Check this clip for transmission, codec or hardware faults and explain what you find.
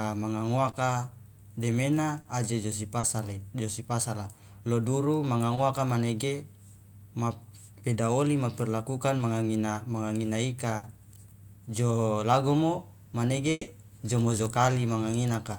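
Three kinds of network fault are audible in this speech, all from lost audio that the receiver patched over.

Short concealed packet loss occurs at 0.71, 2.21, 2.99, 5.55 and 9.17 s. Each time, 20 to 40 ms went missing and was filled by extending the previous sound, leaving a brief smear or wobble, for example just before "aje josi" and after "beda oli ja perlakukan".

A burst of packet loss at 10.77 to 10.85 s removes about 60 ms. The receiver stretches and fades the last sound into a short held buzz or hiss before the speech resumes further on.

At 13.51 to 13.69 s, about 160 ms of speech is missing. It is replaced by a fading continuation of the prior sound and a 10 ms moment of silence, most likely a long network dropout.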